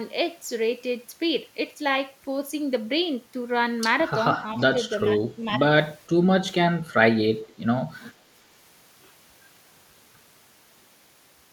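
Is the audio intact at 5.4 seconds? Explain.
No, the speech dips by about 5 dB between 5.17 and 5.6 s, likely speech suppressed in double talk, where the echo canceller mistook overlapping talk for echo.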